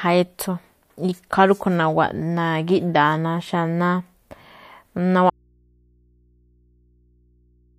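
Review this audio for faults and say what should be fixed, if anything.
At 5.3 s the speech is cut off abruptly in mid-flow and does not return before the clip ends. This is an audio dropout to a faint residue: the wanted signal disappears, but the channel after the break remains live, so the remainder holds a low mains hum roughly 40 dB below the speech level. That points to a likely break upstream, such as a disconnected or failing source feeding an open input, rather than a deliberate pause or fade. Secure and inspect the source cabling and connectors, and monitor input levels during capture so a lost feed is caught and re-recorded.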